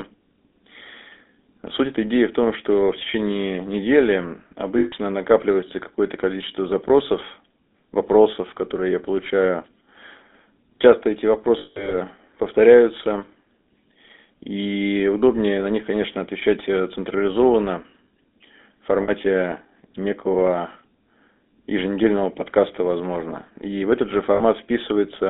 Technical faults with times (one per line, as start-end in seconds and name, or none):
0.00-25.30 GSM full-rate codec
4.78-4.94 lost GSM frames
11.58-11.95 lost GSM frames
19.02-19.11 lost GSM frames
24.34-24.41 lost GSM frames